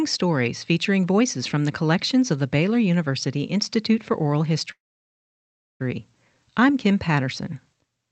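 A call audio freeze runs from 4.71 to 5.82 s. After a brief continuation of the last sound, about 1.03 s of silence follows, likely from delayed packets draining the jitter buffer. The speech then resumes where it stopped, with nothing lost but about 1.09 s later.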